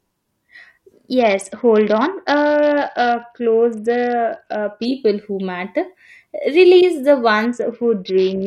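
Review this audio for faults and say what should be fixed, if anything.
Twice the speech turns dull and gritty: from 1.19 to 4.85 s, and again from 7.45 s to the end at 8.47 s. The treble dulls and a coarse, sandy noise rides on the voice. This is a Bluetooth SBC bit pool drop. The link was congested, so the sender cut the encoding budget, which fits a fall from a bit pool of 31 to 7, or about 61 kbps. With so few bits, the upper sub-bands get almost nothing and the rest are quantised roughly. To prevent it, keep the Bluetooth link clear of interference and distance, or record over a wired path.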